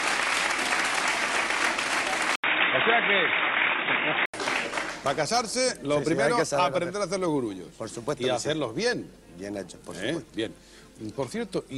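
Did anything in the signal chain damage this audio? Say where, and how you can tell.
Yes. From 2.36 s to 4.34 s the audio turns dull and boxy, with nothing above 3.8 kHz, then opens up again. An 80 ms silence marks the switch, the level barely changes, and new background noise appears roughly 40 dB under the signal. The damage sits at the device or driver stage, most likely an input switched to a poorer device: the system moved to a narrower-band microphone or headset call profile, with its own noise floor, for those two seconds.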